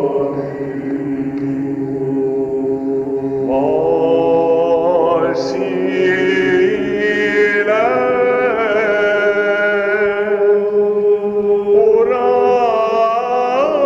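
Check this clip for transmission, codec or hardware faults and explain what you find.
No transmission, codec or hardware faults can be heard anywhere in the clip.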